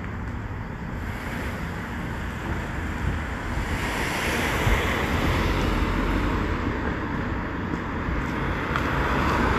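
No technical faults can be heard anywhere in this recording of sounds. The audio continues steadily, with no audible disturbance at any point.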